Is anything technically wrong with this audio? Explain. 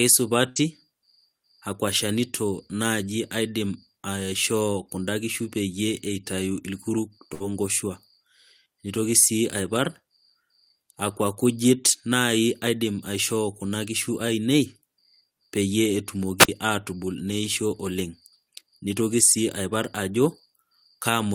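Yes. There are two bursts of packet loss, at 0.49 to 0.59 s and again at 7.34 to 7.43 s. Each time a run of speech packets failed to arrive in time, and the receiver concealed the hole by extending the last sound for about 60 ms while fading it down, so a held buzz or fading hiss replaces the speech. When the audio picks up again, about 60 ms of speech has been skipped. What sets this apart from a squelch mute is that the gap is filled with a stretched copy of the preceding sound, not with silence or static, and the speech jumps forward afterwards.

There is also a wireless microphone squelch dropout from 16.38 to 16.49 s. The radio signal from an analogue FM microphone weakened until the receiver's squelch shut the output off. The hiss rises briefly, the output drops to near silence for about 51 ms, and then the voice returns. Unlike the packet-loss gaps, nothing imitates the voice here. 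The cue is the noise swelling first and then a clean hole, which comes from the radio link, not from a network.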